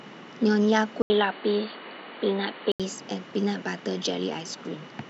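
From 1.02 to 2.80 s the speech turns dull and boxy, cut off above 4.6 kHz with faint new background noise after an 80 ms gap, likely an input switched to a poorer device.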